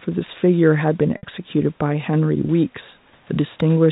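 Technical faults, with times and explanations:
1.17–1.23 s, packet loss with pitch repetition: 60 ms of the speech is lost, which fits two dropped packets. The receiver bridges the gap by repeating the last pitch period and fading it, so the sound briefly holds on one buzzy pitch.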